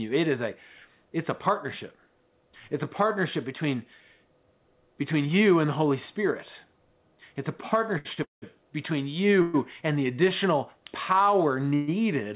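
At 7.98 s and again at 8.13 s there are short stalls from a late packet. The sound is held for about 69 ms, then 40 ms, while the jitter buffer waits, and it resumes from the same point. On a spectrogram this shows as brief flat, smeared horizontal bands.

Three call audio freezes follow, at 8.23 to 8.44 s, 9.42 to 9.56 s (just before "and the"), and 11.75 to 11.90 s. In the first, a buzzy continuation fades into about 150 ms of silence, which appears as a flat gap in the waveform. The other two, lasting 118 ms and 131 ms, are held buzzes with no silent stretch, seen as frozen, striped spectrogram columns. Delayed packets emptying the buffer are the likely cause, and the audio then continues without loss. Throughout, the call path leaves nothing above 4 kHz, which fits a narrowband telephone codec.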